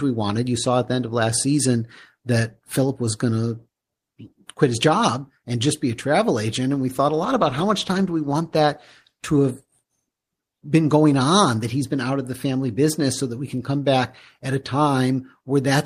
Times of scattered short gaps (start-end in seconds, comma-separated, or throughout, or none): none